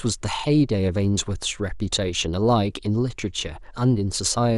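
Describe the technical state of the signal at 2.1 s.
At 2.1 s the speech carries MP2 compression damage, as it does from start to end of the clip. The top end sounds dull. The highs flicker in and out, and a gurgling, granular roughness rides on the voice. This is likely MPEG Layer II coding starved of bits. It splits the signal into 32 sub-bands and shuts off upper bands it cannot afford. The damage is plainly audible, which fits a low rate near 80 kbps.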